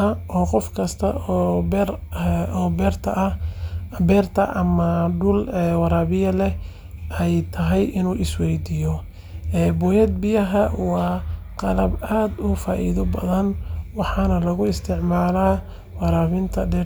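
No faults can be heard anywhere in the recording.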